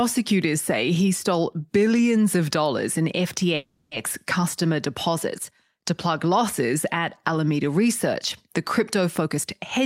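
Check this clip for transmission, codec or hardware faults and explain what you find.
Two faults stand out in this speech clip: a call audio freeze in the middle and a jitter buffer speed-up near the end.

From 3.55 to 3.94 s, right after "billions of dollars in", the voice gives way to a buzzy continuation of its last sound that fades out, with only a brief silence of about 10 ms before "customer deposits to plug" resumes. This is a call audio freeze, likely caused by delayed packets draining the jitter buffer. The receiver filled about 360 ms by extending the final sound, so nothing was lost; a gap was simply inserted. On a spectrogram, the last harmonics smear horizontally and fade. The waveform shows a decaying, repetitive stretch.

From 9.21 to 9.81 s, after "the crypto", the speech runs at about 113% speed with its pitch unchanged, so the closing phrase sounds rushed. This is a jitter buffer speed-up. 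The buffer held more audio than its target, so the receiver repeatedly cut out short pitch-period slices, roughly a tenth of a second in total, to reduce the delay. On a spectrogram, the harmonic spacing stays the same while syllables are compressed in time. The waveform shows whole voiced cycles dropped, with the remaining cycles unchanged in length.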